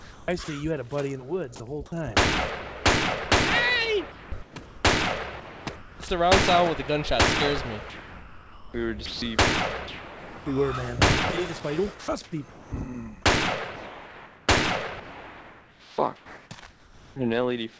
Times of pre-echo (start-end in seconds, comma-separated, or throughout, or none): none